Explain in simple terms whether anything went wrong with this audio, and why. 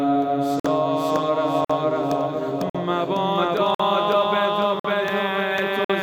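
Yes, there's a gap between chunks problem. The sound cuts out for about 50 ms at 0.60, 1.65, 2.70, 3.75, 4.80 and 5.85 s, once every second. It's delivered in one-second pieces, and a short stretch of silence gets stuck between each one.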